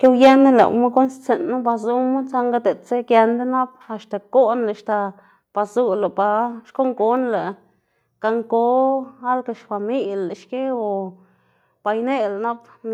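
From 0.04 to 0.63 s, the microphone input was likely set too hot, driving peaks about 6 dB past the converter's ceiling. This microphone overload flattens the tops of a small share of the waveform and gives the loudest syllables a harsh, crackling edge.

Early in that stretch, at 0.06 s, the input gain was likely pulled back by about 2 dB in a microphone volume step-down, and again at 1.05 s by about 5 dB. At each point, speech and background drop abruptly together in level.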